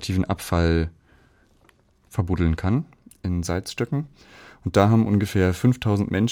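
From 2.77 s to the end, the converter's clock wanders by a few microseconds, so samples land slightly early or late. This sample clock jitter leaves an error about 40 dB below the speech, a fine hiss that rises on loud, bright sounds and vanishes in pauses.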